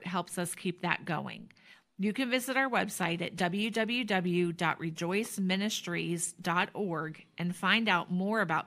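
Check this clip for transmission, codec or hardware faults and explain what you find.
No faults found; the speech shows no audible defect at any point.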